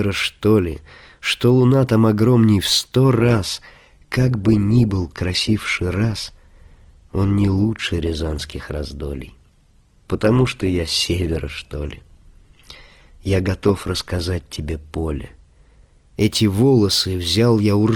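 An adaptive stream at a lower bitrate takes over this speech from 3.17 s to 15.17 s. Quality drops suddenly without a gap, nothing remains above 12.2 kHz and codec artefacts thicken, which fits a slowed connection forcing Opus from 64 down to 16 kbit/s.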